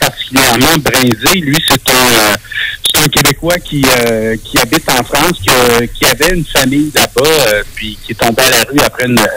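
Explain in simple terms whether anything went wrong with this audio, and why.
Something did go wrong: integer overflow, present throughout the recording. The signal was pushed too loud for the number format, and instead of being capped, the loudest peaks wrapped around to the opposite extreme. That happens on only a small fraction of moments, but each one produces a sharp, violent crack, harsher than ordinary clipping.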